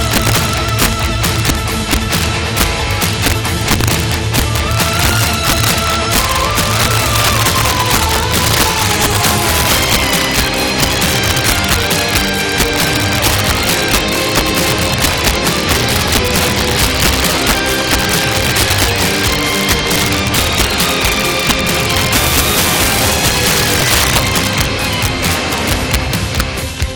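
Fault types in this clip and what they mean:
integer overflow: driven about 7 dB past full scale, roughly two percent of samples wrap to the opposite sign, giving violent cracks on loud peaks, far sharper than clipping's flattening.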